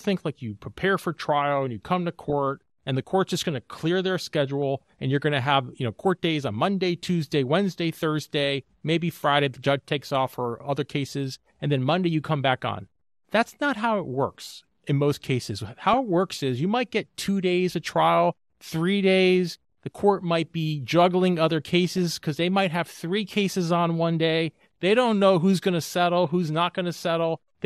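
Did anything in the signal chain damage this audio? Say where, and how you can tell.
Yes. Throughout, the speech sounds dull and granular, with a gurgling edge and upper bands that drop in and out. That is likely MP2 compression at the codec stage: too few bits leave sub-bands coarsely quantised or switched off, which fits roughly 80 kbps.

DAB burbling, a reception-stage fault, adds brief burbling at 2.29–2.33 s (after "and you come to"), 4.49 s, 15.93–15.97 s (after "works in most cases"), and 21.93–22.15 s (after "might be juggling other"). Uncorrected bit errors corrupt audio samples, putting short blips of noise into single sub-bands.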